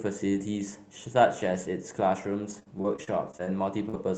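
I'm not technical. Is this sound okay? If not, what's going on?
No. From about 2.49 to 3.95 s there is repeated packet loss (robotic sound): many brief holes, none longer than about 43 ms, each patched by stretching the previous sound. Unlike a single dropout, these come in quick succession, making the speech choppy.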